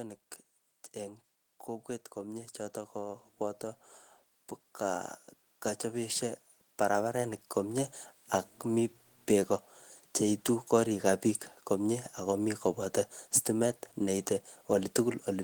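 The automatic gain control judged the input too quiet and stepped its gain up gradually, twice. From 0.97 to 3.69 s it climbs by about 5 dB, and from 5.91 to 7.85 s by about 6 dB. Because the gain acts on everything the microphone picks up, the speech and the background noise swell together rather than the voice alone getting louder, giving a slow, breathing rise in level across each span.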